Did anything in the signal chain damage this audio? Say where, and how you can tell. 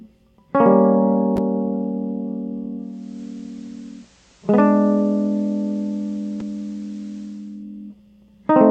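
Yes. From 2.76 s to 7.66 s the music picks up faint hiss roughly 35 dB down and a level drop of about 1 dB, each edge fading over 0.47 s. This is digital radio blending to analogue in the receiver, cross-fading to the station's FM signal and back.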